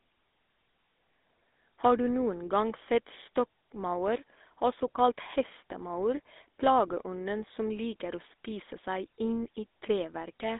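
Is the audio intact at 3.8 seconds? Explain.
No. At 3.8 s the speech is carried through the GSM full-rate codec, which runs the whole clip. It rebuilds the vocal tract from a sparse pulse excitation at a rate that fits 13 kbps. That leaves a buzzy, gravelly roughness, with the sound confined to roughly 250 Hz to 3.7 kHz and nothing above 3.8 kHz.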